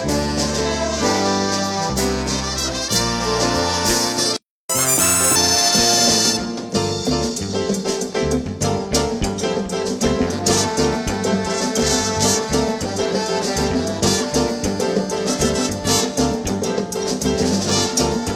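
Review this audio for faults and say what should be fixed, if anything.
A playback stall runs from 4.37 to 4.70 s. The audio stops mid-flow for about 330 ms, then resumes. The player likely ran out of buffered data or had its thread blocked. Prevent it with a deeper buffer and a higher-priority audio thread.

Catch-up at higher speed follows, from 4.70 to 5.36 s. The player resamples its backlog at 1.5 times normal speed. Pitch rises by roughly seven semitones, then drops back. Prevent it by using time-stretching without pitch shift, or by simply dropping the backlog.

Compressed frames are skipped from 11.29 to 11.34 s. About two 46.4 ms frames never play, so roughly 100 ms of audio vanishes. The audio jumps ahead by that amount. Prevent it by checking file integrity and adding error-resilient framing or retransmission.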